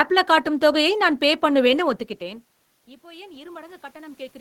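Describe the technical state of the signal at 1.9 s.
At 1.9 s the signal is intact, with no technical fault; the room noise under the speech and the change in level as the talker shifts position around 2 s come from the recording itself, not from the system.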